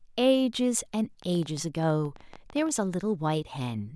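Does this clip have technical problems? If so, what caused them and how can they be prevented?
Yes. A train of clicks, likely from interference by nearby equipment or a faulty connection or power supply, injects about 20 pulses into the speech from 1.22 s to 2.7 s, unevenly spaced at about 11.6 per second and roughly as loud as the speech itself. To prevent it, keep phones and other electronics away from the cables, and use a stable, properly powered interface.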